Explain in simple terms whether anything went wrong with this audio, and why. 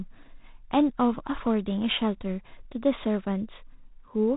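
G.726 ADPCM coding affects the whole clip, from start to finish. This is a telephone-style method that saves space by storing only a rough guess of how each tiny slice of sound differs from the last. Here it keeps too little detail, so a harsh, rasping hiss rides along with the speech, growing louder as the speech does. Everything above about 3.8 kHz is also cut away, which makes the speech sound thin and muffled.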